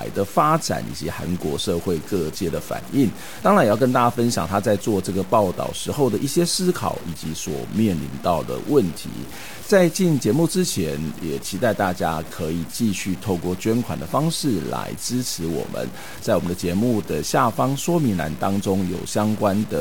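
It's a speech clip with low bit depth without dither running the whole way through. The speech has a grainy, gritty edge that shifts with the level, and in the quietest moments it sputters or drops out instead of fading smoothly. That points to the audio likely having been truncated to something like 6 bits with no dither, so the rounding error tracks the signal, sitting only about 20 dB under it.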